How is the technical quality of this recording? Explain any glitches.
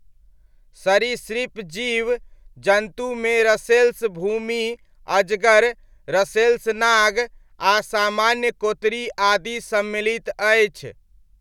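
No technical glitches can be heard anywhere in this speech recording. There is nothing to point to or explain.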